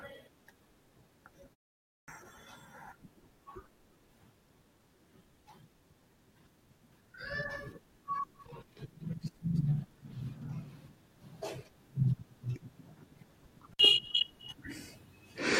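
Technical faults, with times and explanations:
1.80–2.08 s, clipped start after a pause: The output device dropped into a low-power state during the 0.33 s gap and took about 280 ms to wake and lock again. The opening of the next phrase is swallowed, so the speech starts abruptly, missing its first sounds.
13.71–13.80 s, intermittent contact: A loose plug or cable connection briefly opened for about 57 ms. The speech cuts out suddenly, with crackle at both edges where the contact breaks and remakes, and faint hiss fills the short gap.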